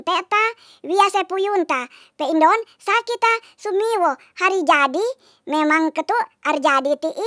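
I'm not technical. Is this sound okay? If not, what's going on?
No, it has a wrong sample rate problem the whole way through. The speech plays about 1.38 times too fast and roughly five and a half semitones too high, consistent with audio recorded at 16 kHz being played back as if it were 22 kHz.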